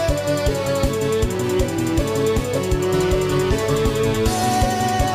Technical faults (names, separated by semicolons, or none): mains hum